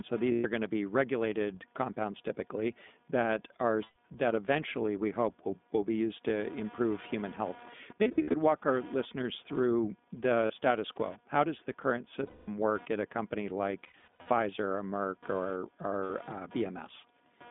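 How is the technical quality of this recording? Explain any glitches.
The technical quality is poor: the speech has been through a narrowband iLBC codec, a computer activity buzz runs underneath it, and seven dropouts from lost iLBC frames break it up.

The iLBC codec shapes the whole clip. The line is band-limited to roughly 200 Hz to 3.6 kHz, so nothing airy survives above that. Each 20 ms frame's excitation is coded on its own, which gives the speech a plainly audible rough, slightly synthetic grain. That grain fits iLBC's 15.2 kbps mode. A muffled low-pass recording is different: it would sound dull but smooth, without this rasp.

Computer activity noise sits about 30 dB below the speech as a buzz pulsing at around 200 times a second. It comes from the computer's processor or graphics load disturbing the audio circuit's shared ground. It does not follow the speech's level or pitch, which separates it from codec distortion. 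It is also not a mains hum, which would be a steady 50 or 60 Hz tone.

Lost iLBC frames occur at 0.32–0.46 s (120 ms), 3.84–3.97 s (120 ms), 7.99–8.35 s (200 ms scattered, longest run about 70 ms), 10.46–10.53 s (40 ms), 12.26–12.49 s (220 ms), 13.84–14.29 s (300 ms scattered, longest run about 100 ms) and 16.04–16.10 s (60 ms). In each gap the decoder repeats the last pitch cycle with added noise, so the dropout sounds like a held, buzzy vowel rather than silence or a click. The voice snaps back immediately afterwards because iLBC frames stand alone.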